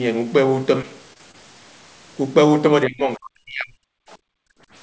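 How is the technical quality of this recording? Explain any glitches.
The recording has three distinct glitches, all of them typical of a voice call. The audio also passed through a wideband call path, which fits G.722 at 64 kbps, so there is nothing above 8 kHz. That band limit is expected, not a fault.

Between 0.82 and 1.35 s there is repeated packet loss, giving a robotic sound. Four short holes appear in the stream, the longest about 24 ms, and roughly 80 ms of audio goes missing in total. Each hole is patched by stretching the preceding sound, so the speech turns choppy and robotic. On a spectrogram, the harmonics smear into flat, repeated slices. In the waveform, the stretch looks like brief copied or frozen segments.

From 2.85 to 4.04 s the speech is pulled down in level, most likely because of speech suppressed in double talk. When both ends talk at once, the echo canceller can't tell the near talker from the loudspeaker echo and attenuates everything. 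For about a second, the voice dips, thins out or breaks into fragments, reaching a drop of around 40 dB. The waveform shows the envelope collapsing in patches, and the spectrogram shows the upper harmonics vanishing.

From 4.32 to 4.70 s the background is gated by the echo canceller. While far-end audio plays through the loudspeaker, the canceller clamps the microphone hard, so the room tone drops out for under half a second, by about 34 dB, and then returns. In the waveform the noise floor falls to near-silence for that span. On a spectrogram it appears as a blank vertical band with abrupt edges.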